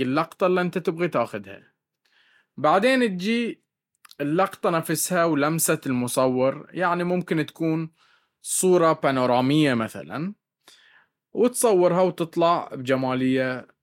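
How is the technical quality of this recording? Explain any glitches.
Nothing glitchy turns up anywhere in this speech recording, so there's no fault to explain.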